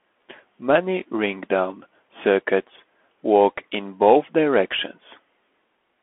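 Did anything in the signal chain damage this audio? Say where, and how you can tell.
Yes, at the codec stage: the speech has been through a Bluetooth CVSD headset codec for its whole length. Nothing above about 3.8 kHz survives, and the band sits roughly between 250 Hz and 3.4 kHz, which is telephone-width. The damage is plainly audible as a granular hiss and scratchy sibilants. CVSD sends one bit per sample, up or down, with an adapting step, which fits a 64 kbps link. Fast, loud high content outruns that step and distorts.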